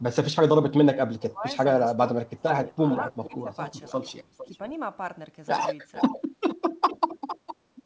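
From 1.19 to 1.57 s the speech dips by as much as about 15 dB, over roughly a third of a second in total. This is speech suppressed in double talk, with the likely cause being an echo canceller that could not tell the local talker from the far-end echo and so turned both down. A second, longer stretch follows from 2.18 to 3.47 s, with around 0.7 s affected. Unlike a dropout or packet loss, these are level dips that pull the speech down in pieces rather than leaving hard silent gaps.

Overlapping that second stretch, an echo leak runs from 2.41 to 4.58 s. A faint copy of the speech, about 20 dB down, trails the original by 457 ms, likely because the loudspeaker-side canceller let part of its microphone pickup through. It returns more strongly, about 15 dB down, from 5.93 to 6.56 s and from 6.89 to 7.55 s, with the same 457 ms delay. That fixed, long offset sets it apart from room reverberation, which smears the sound continuously instead of repeating it. 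All of this sits within an 8 kHz band, which fits 64 kbps G.722 coding.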